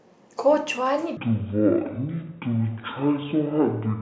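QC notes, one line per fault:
1.17–4.02 s, wrong sample rate: the samples are clocked out at half the rate they were captured at, with no conversion, which fits 32 kHz audio played at 16 kHz. The speech drops to half speed and a full octave lower, sounding slow and deep.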